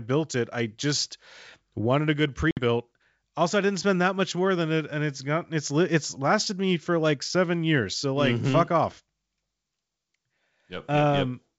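Packet loss on an ADPCM call strikes at 2.51 s, right after "just wanted a good", and lasts until 2.61 s. Around 60 ms of audio drops to a hard-edged silent gap, which suggests several short packets went missing. Because ADPCM codes each sample relative to an adaptive prediction and step size, the decoder's state drifts from the sender's across the hole. Speech resumes slightly distorted, and the distortion fades over the following tens of milliseconds. The G.722 wideband coding around it sounds clean up to about 7 kHz, consistent with 64 kbit/s.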